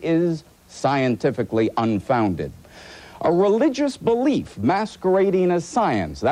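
There are no technical faults to describe at any point in the audio.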